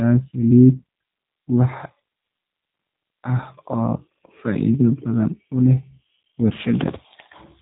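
From start to finish, the speech has passed through a low-bitrate voice codec whose sound points to G.729 at around 8 kbit/s. Rather than storing the waveform, the codec rebuilds each short frame from a vocal tract filter, a pitch predictor and a handful of pulses, so fine detail is discarded. The result is plainly audible: a rough, slightly synthetic texture on the speech, and a hard band limit with nothing above 3.8 kHz, which leaves everything sounding boxed-in and telephone-like.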